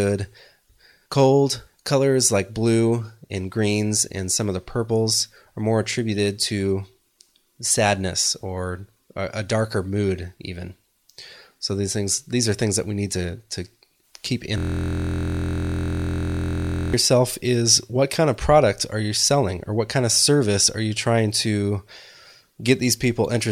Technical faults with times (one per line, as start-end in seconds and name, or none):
14.58-16.93 system hang loop